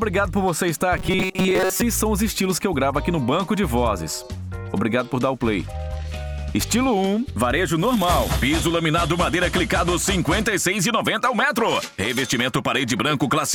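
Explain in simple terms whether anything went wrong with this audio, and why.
Between 0.97 and 1.81 seconds the sound turns into a stiff, metallic buzz. This is robotic sound from repeated short buffers. New audio likely arrived too slowly, so the system kept replaying a tiny slice over and over for most of that stretch. The buzz sits at a fixed 188 Hz, which fits a slice about 5 ms long. Unlike a simple dropout, nothing goes silent. The sound keeps roughly moving but loses its natural tone.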